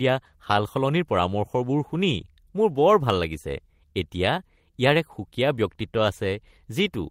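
No technical fault can be heard anywhere in the recording; the signal holds steady throughout.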